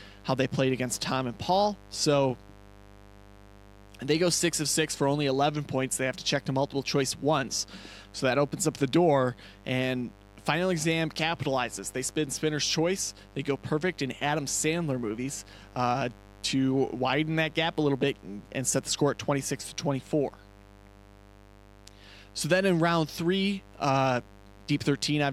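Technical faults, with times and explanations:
Throughout, mains buzz: a steady, raspy buzz sits under the speech at roughly 25 dB below it. It comes from sharp switching spikes, such as a dimmer, rectifier or unshielded lead would let in, recurring twice per 50 Hz cycle, so the pulses repeat at 100 Hz. Those spikes carry a dense ladder of 50 Hz harmonics well into the kilohertz range, which gives the edgy, buzzing texture. A plain hum would be a smooth, low tone instead.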